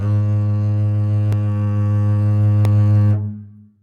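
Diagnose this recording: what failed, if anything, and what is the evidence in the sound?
The music's tempo sags slightly and unevenly across the whole clip. This is clock drift between sender and receiver at the network and jitter-buffer stage. The sender's clock runs roughly 5 percent slow, so the receiver's buffer keeps draining and has to be refilled.

From 0.52 s to 3.74 s the pulse stumbles in small, irregular hiccups, always stretching and never compressing. These are repeated timing corrections in the receiver's buffer. Playback runs at 95 percent speed, with about 150 ms added by repeating short pieces to cover the slow sender.

There are two tiny ticks in the music, at 1.32 s and 2.65 s. Each is a block of digital silence at the driver or buffer stage. The first hole is 1.65 ms and the second 0.67 ms, which fits a 32-sample block. Both are gaps with hard edges and no fade.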